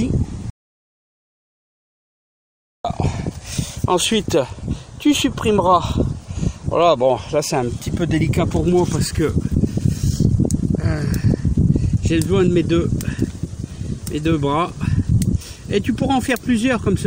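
At 0.50 s the sound cuts to silence until 2.85 s, an audio dropout to silence losing about 2.34 s, likely a dropped input link.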